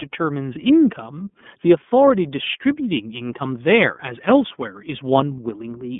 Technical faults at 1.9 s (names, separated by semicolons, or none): iLBC codec